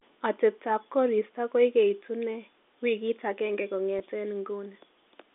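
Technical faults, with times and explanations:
3.99 s, packet loss with pitch repetition: about 10 ms of audio, consistent with a single lost packet on this band-limited telephone line, is bridged by repeating the last pitch period, giving a brief held, buzzy sound. On a waveform, identical cycles repeat; on a spectrogram, harmonics briefly flatten.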